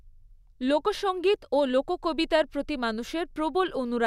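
No technical faults can be heard in this recording.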